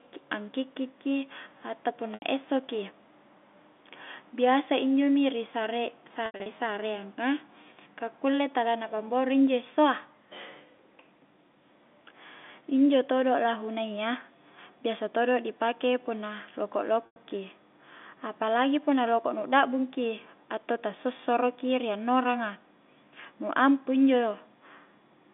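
Packet loss with pitch repetition occurs at 2.14 to 2.22 s after "angkikki ki atau", at 6.26 to 6.46 s as scattered losses, and at 17.06 to 17.16 s. The receiver loops the last pitch period, so the gaps sound like a briefly held buzz rather than clean dropouts, over a narrow telephone band.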